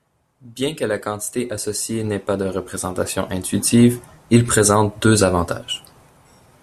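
Nothing in this speech recording stands out as a technical fault, so there's nothing to flag anywhere along it.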